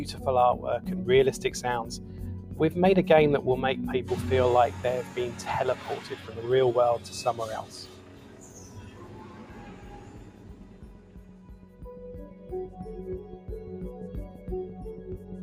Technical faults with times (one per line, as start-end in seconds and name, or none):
0.00-15.42 noise suppressor applied to music or sounds
2.00-2.19 sound cut by the noise suppressor